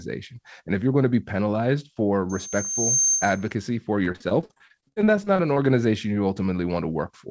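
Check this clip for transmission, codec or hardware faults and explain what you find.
Two faults stand out in this speech clip: a feedback squeal and a stretch of repeated packet loss. The audio also shows the wideband ceiling of a call codec, with nothing above 8 kHz.

Loudspeaker feedback squeal, 2.29 to 3.52 s, right after "penalized for". A microphone was picking up the loudspeaker it fed, and at 6.3 kHz the loop gain went above one. That frequency kept reinforcing itself. A thin, piercing tone swells up over roughly 0.7 s and ends up about 5 dB louder than the speech. It holds there until the squeal drops out at 3.52 s.

Repeated packet loss (robotic sound), 4.04 to 5.57 s. Twenty-two short dropouts occur in this span, the longest 42 ms. Concealment fills each hole by extending the previous sound, so roughly 30 percent of the stretch is synthetic patching. Before the patching can settle, the next gap arrives. 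The speech becomes choppy with a robotic quality, and fragments are missing throughout those 1.5 s.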